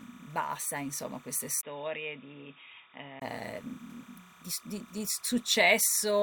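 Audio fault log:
throughout: timecode bleed, a chirping warble about 25 dB below the speech, flipping between 1 kHz and 2 kHz at a 30 frames/s rhythm, unlike a single steady whistle.
1.61–3.22 s: input switched to a poorer device, likely, after "basta insomma queste": a 20 ms gap, then nothing above 3.8 kHz, roughly 5 dB quieter with its own background noise about 50 dB below the speech, clearing before "di s di di".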